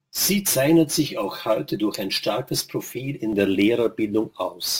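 From the start to 3.33 s the speech has channel delay (comb filtering). One channel runs roughly 5 ms behind the other, and when the two are summed to mono the shared content cancels at evenly spaced frequencies. The first notch sits near 100 Hz, with further notches about every 200 Hz above it. The sound is hollow and phasey. A spectrogram shows fixed dark horizontal stripes at those regular intervals, lasting until 3.33 s.

Throughout the clip there is also sample clock jitter. The converter's clock wobbles by something like 7 µs, so each sample is taken slightly early or late at random. The timing error turns into an amplitude error wherever the waveform changes fast, giving a roughness around 20 dB below the speech. It grows on loud, bright syllables and drops away in pauses. A spectrogram shows a faint broadband haze that follows the level and high-frequency energy of the speech rather than sitting as a steady noise floor.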